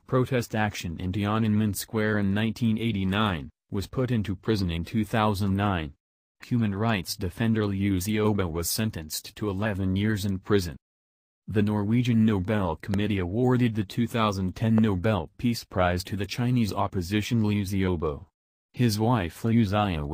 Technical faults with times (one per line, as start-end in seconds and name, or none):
12.94-12.96 loud pop
14.78-14.80 loud pop